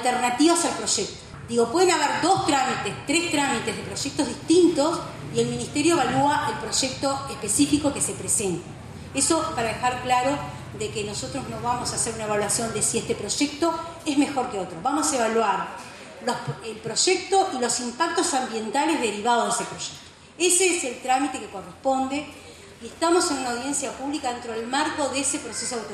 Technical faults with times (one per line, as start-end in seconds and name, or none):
none